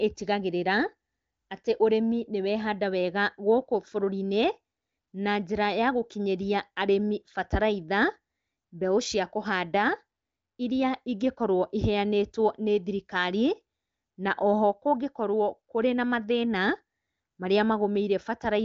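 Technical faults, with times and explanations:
No technical faults are present: the speech comes through an AMR wideband (HD Voice) codec path with content reaching up to about 7.6 kHz, and its clarity fits one of the codec's highest rates, around 23 kbit/s.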